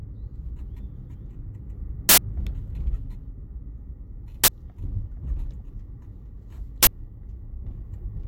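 At 2.09 s an uninitialised buffer plays: a block was sent to the output before any audio was written into it, so stale memory came out as samples. The result is a loud, harsh burst of digital noise lasting 85 ms, which fits a 4096-sample block. The same fault returns at 4.44 s and 6.83 s, each burst 43 ms long, consistent with a 2048-sample block. Their exact block-length durations, hard edges and loudness set them apart from codec damage.

At 7.52 s a corrupt frame is decoded. Flipped bits in the compressed data led the decoder to place energy at the wrong frequencies, producing a very brief, quiet glitch that spans roughly a few frames. Unlike the buffer bursts, it is faint and reshapes the sound's spectrum rather than replacing it with loud noise.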